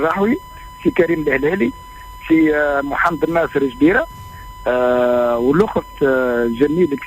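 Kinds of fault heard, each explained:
USB whine: Current drawn by the USB bus in 1 ms frames leaks into the audio through the power or ground path, producing a steady whine of fixed pitch at 1 kHz, its strongest component, running throughout the clip around 20 dB below the wanted sound.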